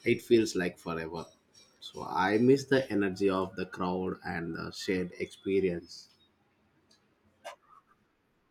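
No technical faults can be heard anywhere in the recording.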